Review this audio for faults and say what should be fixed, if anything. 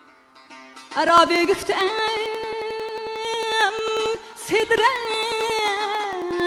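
Periodic USB or driver dropouts run from 1.09 s to 6.40 s. A tick repeats every 0.09 s, around seventy in all. Each time, about 10 ms of audio is skipped outright. Something stalls the bus or driver on schedule. To prevent it, find and disable that blocking background task.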